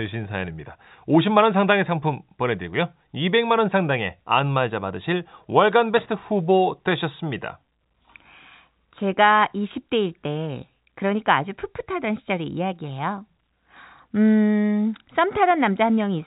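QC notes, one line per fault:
No faults heard.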